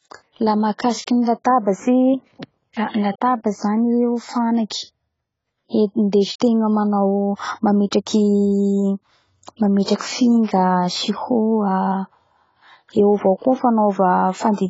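From start to end, the speech sounds dull and smeared. Nothing is heard above 7.6 kHz. Sibilants fizz and sustained sounds warble. This is likely heavy AAC compression. The coder dropped the top band and quantised coarsely, which fits a bitrate near 16 kbps.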